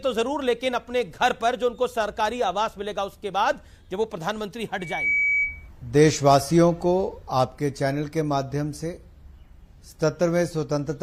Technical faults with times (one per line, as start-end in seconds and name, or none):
4.80-5.69 loudspeaker feedback squeal